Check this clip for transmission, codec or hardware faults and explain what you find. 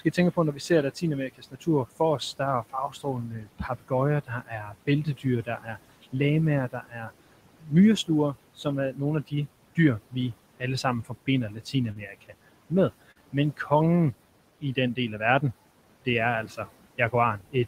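Three faults are present: noise suppressor artifacts across the whole recording, speech cut by the noise suppressor in three stretches, and two short concealed packet losses.

Noise suppressor artifacts run from start to finish. The suppressor estimates the steady background in each frequency band and turns those bands down frame by frame, here by about 18 dB. The room noise, sitting about 17 dB under the speech, sinks in the gaps and comes back beneath the talking. A spectrogram shows the noise floor switching between dark gaps and grey bands under each phrase.

Speech cut by the noise suppressor occurs from 0.0 to 6.15 s, 6.71 to 12.72 s, and 16.05 s to the end. In the first span about two seconds of the speech suffer, and in the second about a second and a half. Because the suppressor mistakes low-level speech for noise, it pulls soft consonants and word tails down by up to about 19 dB, leaving them swallowed or faint. 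On a spectrogram the high-frequency fricative energy and the trailing edges of phrases look clipped into sudden darkness. In the waveform the decays fall abruptly instead of tapering.

Short concealed packet loss appears twice, at 11.91 to 11.97 s and at 13.11 to 13.17 s, each time filling about 40 ms of missing audio. The receiver bridged each gap by extending the preceding sound and then crossfading back, so each one is heard as a brief smear or wobble. A spectrogram shows a short patch of frozen, repeated harmonics or smoothed noise that breaks the natural movement of the formants. In the waveform a short repeated cycle or smoothed noise is visible where fresh detail should be.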